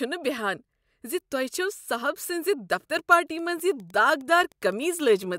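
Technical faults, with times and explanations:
3.39 s to the end, after "دفتر پارٹی": Wi-Fi interference, faint ticking every 102.4 ms as a nearby radio's beacon is rectified, clearly pulsed rather than a continuous mains hum.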